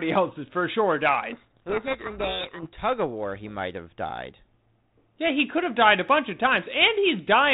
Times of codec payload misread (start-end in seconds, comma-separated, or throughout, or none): 1.32-2.67